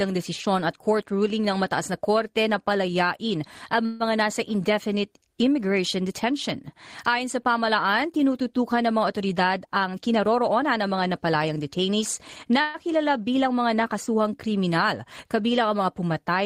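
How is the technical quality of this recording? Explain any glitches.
The speech is interrupted by three timing glitches typical of a network call.

At 3.85 to 4.03 s and again at 12.61 to 12.77 s, the sound stalls into a brief fading buzz or hiss of 146 ms and then 129 ms before resuming. This is a call audio freeze, likely from delayed packets draining the jitter buffer. The receiver stretched the last sound, so each pause adds delay while nothing is lost.

From 9.64 to 11.49 s the speech runs slightly hurried, about 8% fast, with pitch unchanged. This jitter buffer speed-up comes from the receiver trimming short pitch-period slices, around 150 ms in total, to shed excess buffered delay.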